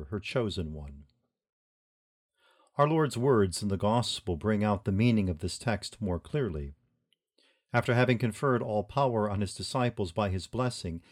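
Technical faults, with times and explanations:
No technical faults are audible in this recording.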